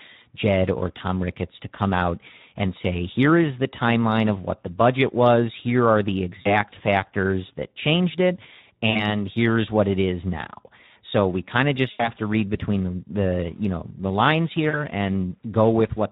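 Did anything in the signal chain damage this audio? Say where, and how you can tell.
Yes. At the codec stage, the whole clip carries plainly audible Speex codec damage: the speech sounds hoarse and noisy, which fits a low-quality setting around 11 kbps, where the CELP excitation gets too few bits and the top band is only a noise-like fill.

On the network side, there's VoIP packet loss concealed by the speech codec at 6.41 to 6.53 s, 8.89 to 9.05 s, 11.91 to 12.10 s and 14.70 to 14.80 s. The decoder keeps extending its last pitch and filter into a fading buzzy tone or coloured noise, and because each frame builds on the previous one, the sound stays weak for a little while after each gap.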